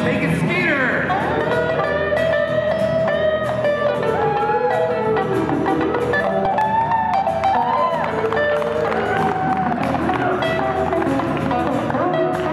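The audio carries CD scratch ticks from 5.82 to 6.61 s: six brief ticks, each only a few milliseconds long, spaced evenly at about six per second. Their even spacing, once per disc revolution where a blemish defeats error correction and the player interpolates or mutes samples, distinguishes them from the random clicks of vinyl dust.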